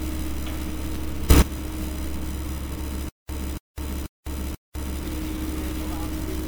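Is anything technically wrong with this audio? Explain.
Yes, there are three problems. Throughout, the audio sounds swirly, smeared and hollow, with blurred attacks. This is likely generation loss from a few passes through MP3, consistent with 96 kbit/s.

From 1.3 to 1.42 s, there is a sudden gain jump of about 18 dB. Sound and background leap together, likely because the level was switched without a ramp.

From 3.09 to 5.04 s, a stutter with silent gaps appears. A 283 ms fragment repeats four times, each followed by 203 ms of silence. This points to a stalled stream that replayed its last fragment, and the audio in between is lost.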